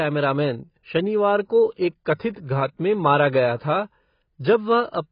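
Heavy low-bitrate coding, likely AAC compression of the AAC-LC kind at a rate that fits about 16 kbps, has stripped everything above 5.1 kHz from this speech clip, so it sounds dull and muffled. Coarse quantisation smears the sound and gives sibilants and sustained sounds a warbly, fizzy texture. A pre-echo appears at 2.33 to 2.36 s, just before "घात में मारा गया". There, the coder's noise, spread across its whole transform block, fills the quiet moment before a sharp attack, so a short hiss of about 36 ms precedes it and the onset sounds softened.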